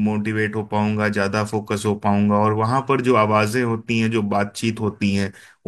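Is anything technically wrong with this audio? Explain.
No, nothing technically wrong stood out on listening to this speech clip.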